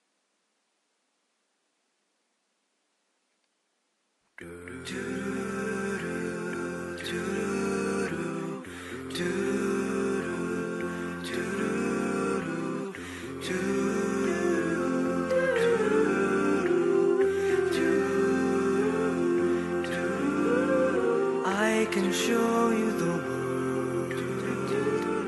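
Nothing in the recording stood out as a technical problem on listening.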